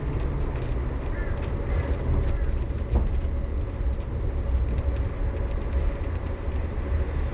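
No technical fault can be heard in this recording of everyday sound, which has passed through a call path whose content stops at about 4 kHz, consistent with narrowband telephone coding such as G.711 at 64 kbps.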